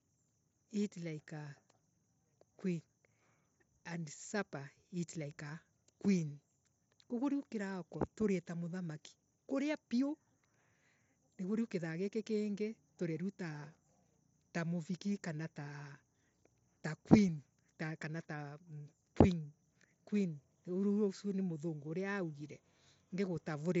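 Nothing goes wrong anywhere in this speech recording; it simply comes across as audio carried over a Bluetooth headset link using the wideband mSBC codec.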